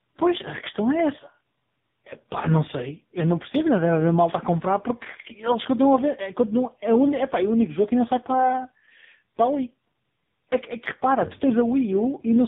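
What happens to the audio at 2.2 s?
At 2.2 s the speech carries tandem speech coding, which runs through the whole clip: three lossy speech codecs in a row, CVSD, GSM full rate and finally AMR-NB at 6.7 kbit/s, each re-coding the previous one's damage, so nothing remains above 3.7 kHz. Unlike a single low-rate codec, the roughness and warbling are compounded rather than merely muffled.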